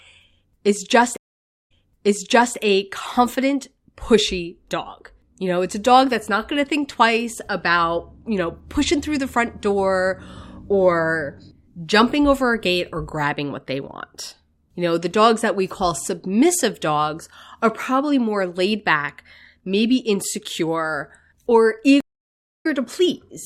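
Speech, broken twice by a dropout followed by a jump. From 1.17 to 2.56 s the sound cuts to 536 ms of silence, then fades back in about 0.86 s earlier, repeating material already heard. From 22.01 to 22.67 s a 644 ms silence is followed by a restart roughly 70 ms further on. Both are stream reconnects: the connection dropped, the player reconnected and began decoding afresh mid-stream.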